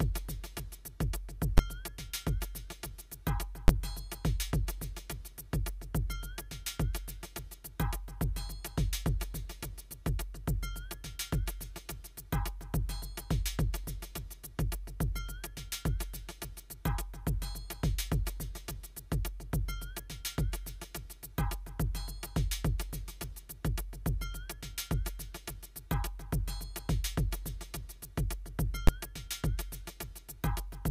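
Single loud bangs at 1.58, 3.68 and 28.87 s are invalid numbers at full scale: each 11.6 ms block, fitting a 512-sample buffer, sat flat at one extreme value far beyond the audio's peaks.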